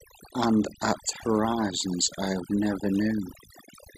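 Throughout the speech, the background drops to near silence scattered with twinkling specks. That is overdone noise removal: a noise reducer set too hard pushes individual frequency bands down whenever they sit close to its noise estimate, stripping quieter parts of the voice too.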